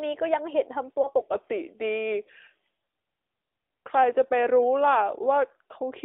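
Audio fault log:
throughout: AMR narrowband mobile codec. The speech is confined to a telephone band of roughly 300 Hz to 3.6 kHz, with nothing above 4 kHz because the codec runs at 8 kHz sampling. Damage is plainly audible. Vowels have a buzzy, synthetic edge because the codec rebuilds the voice from a vocal-tract model excited by a few pulses per subframe, and that sparse excitation cannot carry natural detail. The degree of roughness fits a mid-rate mode around 10 kbps.
1.02–1.10 s: lost AMR speech frames. A brief dip or warble interrupts the speech here. The sound fits a single 20 ms frame failing its check. The decoder bridged the gap by repeating the last good pitch and vocal-tract settings at reduced gain, which produces the momentary smeared, quieter stretch. Because only one frame went missing, the concealment never faded fully to silence. The voice recovers within a fraction of a second, sounding weak or rough as it does.
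1.21–6.05 s: section at the wrong speed. From 1.21 s to the end, the speech plays at about 0.84 times normal speed, so it drags and sits about three semitones lower. Pitch and tempo drop together, and the change is abrupt rather than gradual. That points to the section being played against the wrong clock, likely a player or edit that assumed an incorrect sample rate for this part. The voice sounds deeper, heavier and slower than in the opening second.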